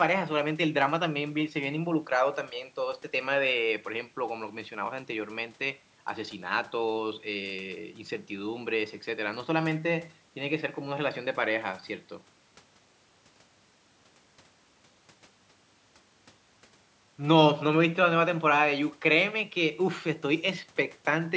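Listening to this speech recording, nothing technically wrong stood out, and the thinner low end from the call microphone processing is expected rather than a fault.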